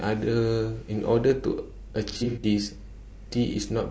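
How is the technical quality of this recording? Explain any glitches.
The recording has plainly audible compression damage throughout, plus one burst of dropouts.

Low-delay AAC compression: The speech was likely squeezed through AAC-ELD at a low bitrate, around 32 kbps. It codes about 500 frequency lines a frame, and at this bitrate the bits run thin. The voice comes out rough and grainy, with noise filling the gaps between harmonics and a top band that sounds dulled and somewhat synthetic. This persists from start to finish.

AAC frame loss with concealment: From 2.12 to 2.44 s, compressed frames went missing. Together they total about 180 ms scattered over roughly 300 ms, with the longest gap around 70 ms. The decoder covers each hole by rebuilding sound from the last good spectrum, with its detail roughly guessed. The result is a stretch of smeared, noisy or phasey speech where the voice loses its definition before the normal audio resumes.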